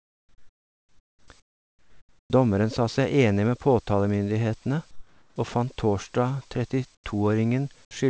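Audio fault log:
0.00–1.28 s, 1.40–2.30 s, 4.91–5.36 s and 6.95–7.04 s, comfort noise in place of the background: in each pause the real room tone drops out and a flat, featureless hiss takes over, about 14, 11, 8 and 16 dB quieter respectively, before the sound picks up again. That's likely discontinuous transmission, where the sender goes quiet between phrases and the receiver fills in synthetic noise. Under all of this there's nothing above 8 kHz, which fits the wideband call codec.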